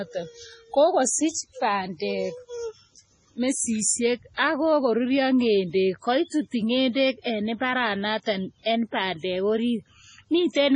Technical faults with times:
0.00-10.75 MP3 compression
4.34-4.38 pre-echo
8.63-8.66 pre-echo

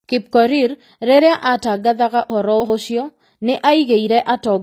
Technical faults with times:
0.00-4.62 HE-AAC compression
2.30-2.70 chunks out of order

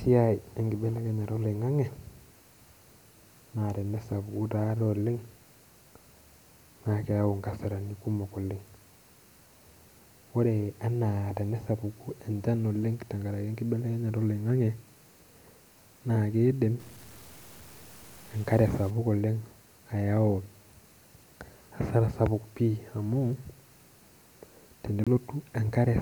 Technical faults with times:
16.80-18.90 stuck bit
25.04-25.08 corrupt frame decoded

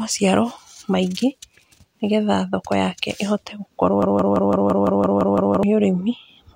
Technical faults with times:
4.02-5.63 broken-record loop

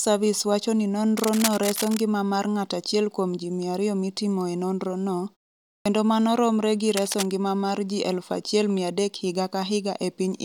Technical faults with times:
1.17-2.01 cable scratch noise
5.78-5.86 clipped start after a pause
6.88-7.31 cable scratch noise

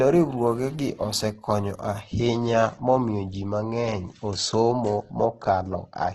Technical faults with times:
0.00-6.15 Opus compression

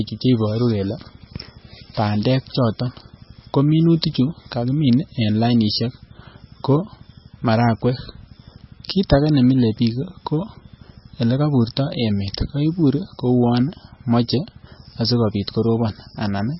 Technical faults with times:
0.00-16.59 MP3 compression

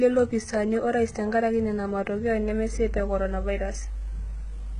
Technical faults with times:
0.00-4.79 HE-AAC compression

